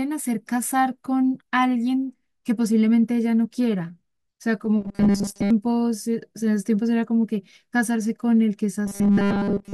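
From 4.81 to 5.51 s and again from 8.86 s to the end, the speech becomes robotic sound from repeated short buffers: a rigid, metallic 200 Hz buzz, likely from a 5 ms buffer replayed through most of each stretch. Unlike codec warble, the pitch stays fixed instead of wavering.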